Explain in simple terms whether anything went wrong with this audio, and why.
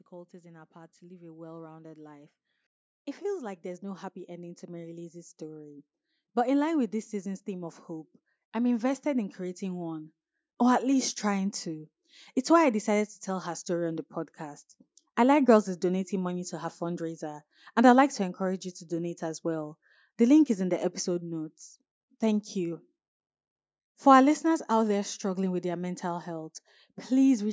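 Something did go wrong: automatic gain rising. From 0.11 s to 21.4 s, the level control decided the microphone was too quiet and kept turning it up, so the speech and the background noise grow steadily louder together over those twenty-odd seconds.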